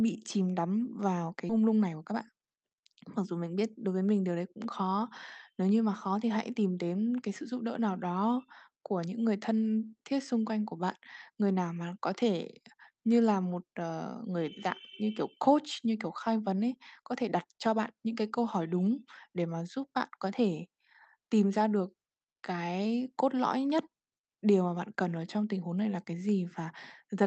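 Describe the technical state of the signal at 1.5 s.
At 1.49 to 1.51 s there is a skip ahead. Roughly 0.7 s of speech was discarded while later audio was already queued, so playback jumps forward and joins the two sides almost seamlessly. Unlike a dropout, no silent gap or fill is heard.

Straight after, from 1.59 to 4.02 s, just before "mình điều đấy cũng", comes a jitter buffer speed-up. The buffer, still holding excess audio, trimmed short pitch-period pieces repeatedly, removing around a third of a second. The speech runs about 110% fast and sounds hurried, but unlike a resampling error its pitch stays unchanged.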